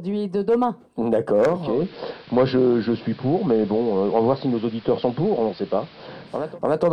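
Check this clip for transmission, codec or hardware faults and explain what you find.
One fault is present: digital radio blending to analogue, from 1.44 s to 6.60 s. The receiver lost its digital stream and cross-faded over about 0.47 s to the station's AM broadcast, returning to digital at the end. The AM path carries a narrower band, so the top end dulls, hiss rises to roughly 25 dB below the signal, and the level shifts by about 2 dB. On a spectrogram the upper band disappears and a noise floor fills the section. The waveform shows a small step in level at each blend.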